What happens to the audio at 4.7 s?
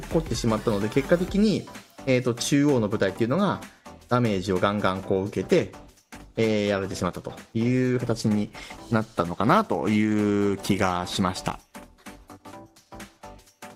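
Nothing goes wrong at 4.7 s; the audio plays through that moment intact, with no dropout, click or other fault.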